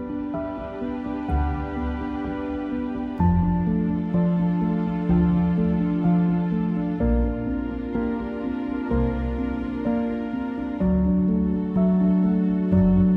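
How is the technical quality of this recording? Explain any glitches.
No glitches or faults can be heard anywhere here.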